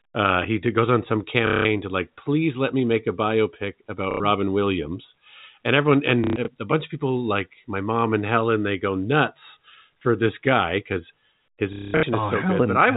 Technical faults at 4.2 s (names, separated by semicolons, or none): packet loss with last packet repeated